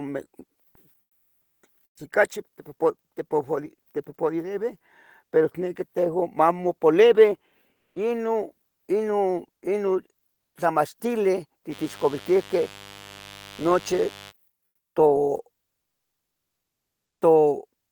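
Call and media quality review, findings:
Comfort noise in place of the background, 1.03–1.63 s, 1.87–1.95 s, 7.75–7.95 s, 14.67–14.95 s: pauses swapped for smoother synthetic noise, mostly quieter, likely Opus DTX discontinuous transmission.

Mains buzz, 11.69–14.33 s: steady raspy 50 Hz harmonic buzz, well below the speech level, from switching spikes entering via a dimmer, rectifier or unshielded lead.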